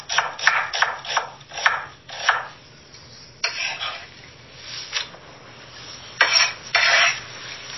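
From start to finish the sound has a watery, swirling texture, with sharp onsets smeared rather than crisp. Nothing is present above 5.8 kHz, so the top end is dull and closed in. This is likely MP3 compression at a very low bitrate, around 24 kbps: short of bits, the encoder cut the treble at a fixed point and kept dropping weak frequency lines from frame to frame.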